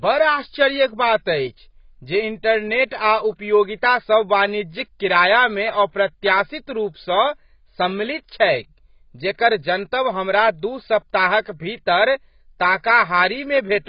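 Heavy AAC compression, likely at a very low bitrate of around 16 kbps, strips everything above 5.1 kHz throughout, leaving the speech dull, smeared and fizzy. From 2.88 to 2.91 s, pre-echo spreads the codec's noise about 36 ms ahead of a sharp attack, so a brief hiss precedes it and softens its onset.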